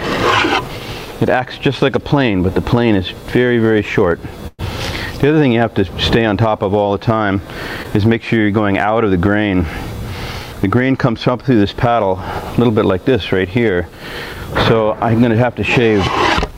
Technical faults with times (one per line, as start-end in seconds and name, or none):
4.47-4.61 call audio freeze
7.83-7.86 short concealed packet loss
10.44-10.75 jitter buffer speed-up